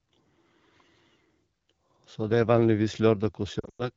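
A speech clip carried over the AMR wideband (HD Voice) codec. It sounds clear, with only light coding damage, which fits a rate around 12.65 kbit/s. Near the end, from 3.59 to 3.89 s, there are lost AMR speech frames. About 160 ms of audio is missing, scattered across a 200 ms stretch. The longest gap runs 100 ms. Radio errors likely corrupted these frames. The decoder filled them by repeating the last good settings at falling level. So the sound drops quickly to near silence and returns briefly weak or rough.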